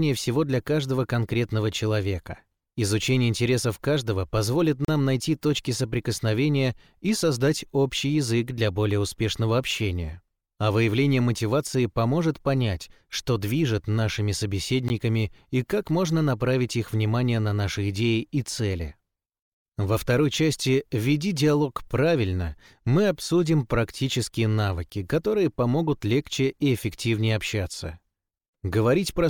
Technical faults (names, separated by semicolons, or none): gap at a join of encoded pieces